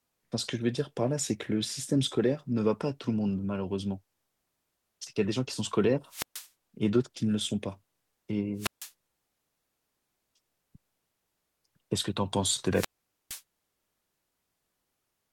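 At 6.07 to 6.49 s, 8.56 to 8.92 s and 12.71 to 13.42 s the speech suffers a wireless microphone squelch dropout. The radio link fades, hiss swells, and the receiver's squelch mutes the output for about 130 ms, 150 ms and 460 ms respectively. The speech then returns. The rising static before each hole sets it apart from a digital packet-loss gap, which cuts out abruptly and cleanly.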